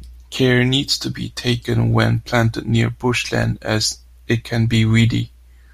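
A scratch or blemish on the disc wipes out more data than error correction can rebuild on each rotation, so the player patches or mutes those samples. The result is CD scratch ticks: five brief clicks from 3.15 to 3.71 s, each only a few milliseconds long, recurring about seven times a second through the speech.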